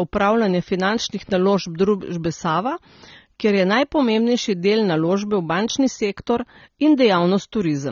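Throughout the clip, the speech bears the marks of heavy AAC compression, most likely AAC-LC at a low bitrate in the region of 24 kbps. The encoder had too few bits for the full spectrum, so it removed everything above about 7.1 kHz and coarsely quantised what remained. The result is a dull, band-limited voice, with sibilants and vowel tails taking on a fizzy, warbling smear that stays plainly audible from start to finish.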